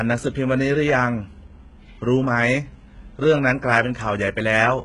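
From start to finish the speech carries heavy codec damage that is most likely HE-AAC compression. The treble sounds synthetic: sibilants come out gritty and lispy, with a metallic sheen, and the damage points to a very low bitrate, around 12 kbps. On a spectrogram the upper band shows blurred copies of the lower harmonics that do not line up across the crossover, and everything stops at a hard ceiling near 11.1 kHz.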